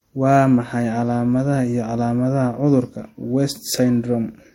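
Right through the speech there's a hard ceiling with nothing above 16.5 kHz, plus two flavours of compression smear stacked together. That points to transcoding between lossy codecs, likely an MP3 pass re-encoded to Vorbis, each layer adding its own swirly artefacts.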